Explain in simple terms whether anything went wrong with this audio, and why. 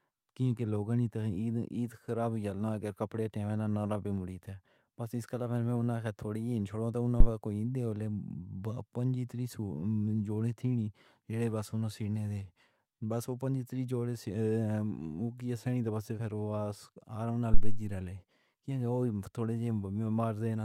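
Two phantom power thumps, deep low thuds at 7.2 s (between "تھوڑی ہی چھوڑو" and "کوئی ڈیولے") and 17.5 s, come from the microphone's power being switched. Each dies away quickly, unlike the rustle of a handled microphone.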